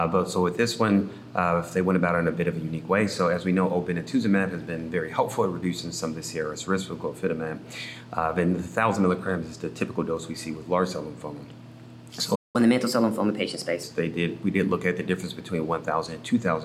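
At 12.35 s the sound cuts out abruptly in mid-flow. Silence holds until 12.56 s, a gap of about 0.2 s. This is a playback stall. The player had nothing to send to the output for that moment. The likely cause is a buffer that ran dry or a playback thread that was blocked. When the audio returns, it picks up from where it stopped rather than skipping ahead.

Straight after the gap, from 12.56 s to 13.83 s, there is catch-up at higher speed. The player works through its backlog by resampling at 1.15 times normal speed. Because speed and pitch are tied together here, everything sounds hurried and sits about two semitones sharp. At 13.83 s both drop back to normal, once the lost time has been recovered.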